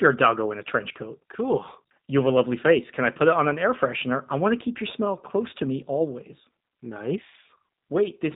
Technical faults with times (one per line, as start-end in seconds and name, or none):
0.00-8.35 G.729 codec